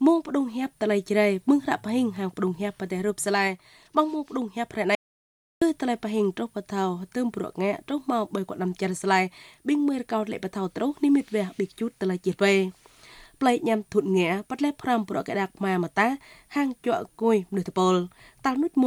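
At 4.95 s the sound cuts off abruptly into silence, with no room tone, until 5.62 s, an audio dropout to silence lasting about 0.67 s. The input was likely lost while recording continued writing silence, so everything in that span is missing.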